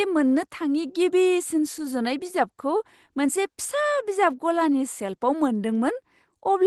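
The sender's clock runs about 4 percent slower than the receiver's throughout this speech, so clock drift between sender and receiver keeps starving the jitter buffer in the call path. From 0.18 to 6.53 s, repeated timing corrections insert short repeated pieces to cover the gap, playing the audio at 96% speed and adding around a fifth of a second overall. These corrections are heard as faint, unevenly spaced hiccups and a slightly dragging, unsteady tempo.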